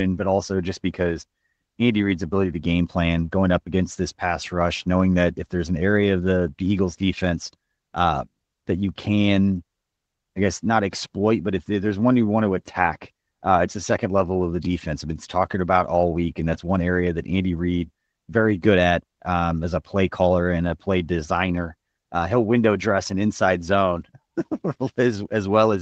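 Nothing in this speech clip stood out as a technical problem on listening.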